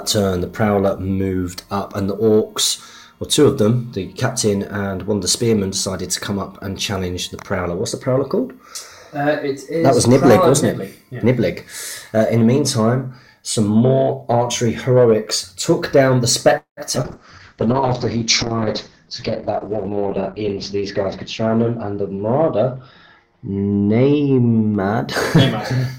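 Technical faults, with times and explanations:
16.57–16.80 s, call audio freeze: the audio holds and fades for about 0.2 s, with roughly 0.12 s of true silence, likely from delayed packets. On the waveform this appears as a flat gap.
16.95 s, skip ahead: playback jumps forward, losing roughly 70 ms. The two sides are spliced almost directly, so the waveform shows an abrupt discontinuity.
17.02–17.07 s, short concealed packet loss: 60 ms never arrived and was bridged with synthesized continuation. It is heard as a brief smear, and the spectrogram shows a blurred, smoothed patch.
17.05–25.52 s, call bitrate drop: the bitrate falls from 96 to 7 kbps and bandwidth narrows from 20 kHz to 8 kHz. The sound turns muffled and rough, and the spectrogram shows the top cut off.
19.57–20.54 s, jitter buffer speed-up: pitch periods totalling roughly 0.1 s were trimmed to reduce delay. The sound runs at 109% speed and unchanged pitch, so waveform cycles are skipped at intervals.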